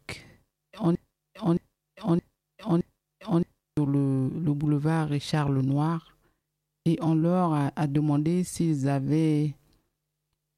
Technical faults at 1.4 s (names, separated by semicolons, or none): broken-record loop